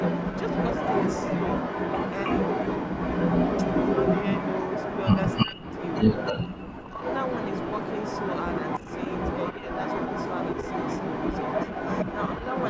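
From 0 to 6.47 s, and again from 6.77 s to the end, an echo leak trails the speech. A copy arrives 316 ms late, first a little louder than the speech and later about as loud. This is likely an echo canceller failing to remove loudspeaker pickup. The fixed lag and matching wording set it apart from room reverberation.

Speech suppressed in double talk, likely from the canceller turning down its own talker along with the echo, shows as near-silent holes at 5.45–5.67 s and 6.47–7.01 s. Shallower dips of roughly 10 dB follow at 8.83–8.87 s and 9.53–9.68 s. These are gaps, not repeats.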